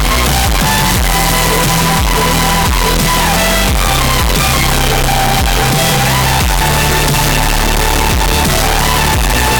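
From the first sample to the end, the audio is grossly loud and harsh, with the waveform flattened into a near-square shape sitting at an almost fixed, high level regardless of how quiet the material should be. This is a float read as integer fault, likely 32-bit float samples interpreted as 32-bit integers, so sign and exponent bits dominate each value. Background noise comes up as loud as the main sound, though its pitch contour remains traceable.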